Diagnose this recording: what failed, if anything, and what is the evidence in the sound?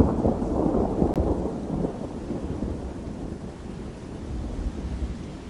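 The failure sits in the streaming or playback stage: a gap between stream segments. Two consecutive segments carry timestamps that do not quite meet, so the player leaves a hole at the boundary and fills it with silence. At 1.14 s the sound drops out abruptly for about 17.9 ms, with hard edges on both sides, then resumes exactly where it stopped. Nothing is missing from the recording; the timeline is simply stretched by that silent insert.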